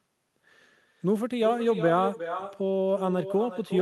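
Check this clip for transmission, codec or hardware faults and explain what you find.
One fault runs through the whole speech clip: echo with no canceller. On the far end the call is playing through a loudspeaker, that end's microphone picks it back up, and no echo cancellation strips it out before it returns. From start to finish, every phrase is trailed by a second copy arriving around 0.4 s later, roughly one network round trip, at about 10 dB below the direct speech. That copy sounds quieter and thinner. The call codec's usual coding noise and high-frequency limit, which point to a superwideband Opus setting, can be heard under it.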